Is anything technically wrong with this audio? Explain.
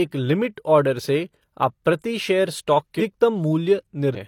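Yes. This speech clip has two bursts of damaged data in a compressed stream. The first runs from 2.97 to 3.02 s, just after "आप प्रति शेयर स्टॉक". The second runs from 4.12 to 4.18 s. Each lasts roughly 50 to 60 ms. In both places, bytes in the compressed stream are corrupted. The decoder misreads those frames, loses sync and searches for the next valid header. Each event sounds like a chirp, squawk, click or short hole.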